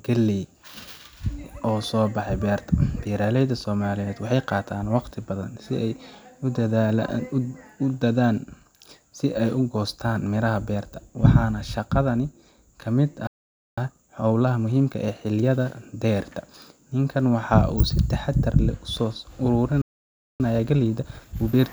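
Playback stalls at 13.27 s, right after "waxaana shaqadani ka mid", and at 19.82 s silence this speech for about 0.5 s and 0.58 s, likely because the player ran out of buffered data or its thread was blocked. Time-compressed catch-up follows each gap, from 13.78 to 15.78 s and from 20.40 s to the end, as the player trims and cross-fades small slices to clear its backlog. The speech runs at about 1.25 times normal speed at unchanged pitch.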